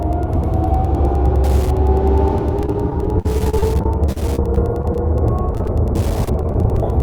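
All the way through there's Wi-Fi interference, a faint tick roughly every 102.4 ms, about ten a second, sitting well below the sound, from a nearby radio's beacon getting rectified.

Then repeated packet loss (robotic sound) hits from 2.62 to 5.10 s, 5.55 to 5.69 s and 6.25 to 6.78 s: short holes patched by stretching the last sound, leaving it choppy with pieces missing.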